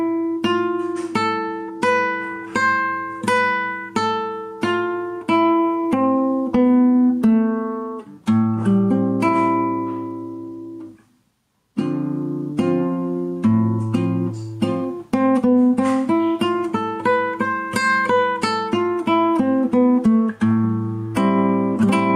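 Gain pumping runs throughout the clip, with a gain swing of around 5 dB. This likely comes from gain set far too high into a fast limiter, which squashes the dynamics.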